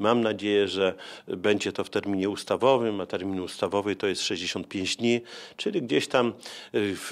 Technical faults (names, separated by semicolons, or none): none